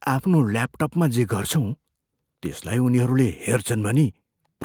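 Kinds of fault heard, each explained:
No technical faults can be heard in this speech.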